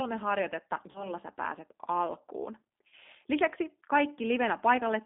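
From start to finish the speech passes through a G.729 codec. The band is held between 200 Hz and 3.6 kHz, so a spectrogram shows an empty region above 3.6 kHz and little below 200 Hz. The coding damage is plainly audible: a rough, slightly synthetic edge where the voice is rebuilt from a filter, a pitch predictor and a few pulses per frame. That sound fits an 8 kbit/s low-rate codec such as G.729A.

At 0.91 s, VoIP packet loss concealed by the speech codec begins and runs to 1.10 s. The decoder lost audio, which fits about 40 ms or four 10 ms frames, and filled the gap by repeating its last pitch and filter at falling gain. It sounds like a buzzy, smeared stretch of voice. A spectrogram shows flat, repeated harmonics fading out, and the waveform shows a shrinking periodic envelope. Recovery lingers past the lost span.

A second concealed loss runs from 2.88 s to 2.93 s. It is shorter to the ear but of the same kind: a brief, tonal, fading smear where the decoder extrapolated over what again points to roughly 40 ms of missing frames. 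On a spectrogram it shows as a short band of frozen harmonics, and the waveform dips in level.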